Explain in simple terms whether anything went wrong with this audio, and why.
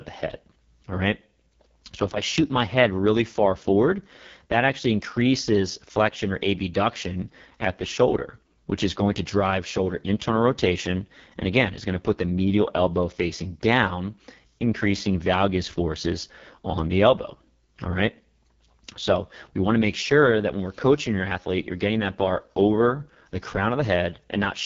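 Something did go wrong, and it lasts the whole clip. The speech has been squeezed through an AMR wideband (HD Voice) codec, the kind used for phone calls, set to one of its lowest quality settings. The codec rebuilds the voice from a simple model of the throat and mouth. At this low setting that model is too crude, so the speech comes out rough and raspy. Nothing is left above about 7.4 kHz, which takes away the crisp edge.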